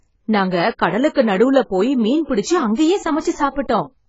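Speech, with AAC compression damage throughout. Nothing survives above 7.6 kHz, and the sound is dull and smeared. The likely cause is a low-bitrate AAC-LC encode.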